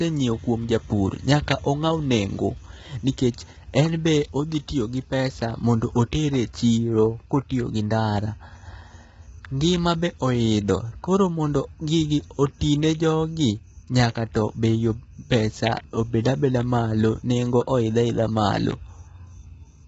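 Low-delay AAC compression runs throughout the speech. The voice sounds rough and grainy, with noise between the harmonics and nothing above 7.8 kHz. Short coding frames likely resolve pitch poorly, and the heavy damage fits a bitrate around 16 kbps.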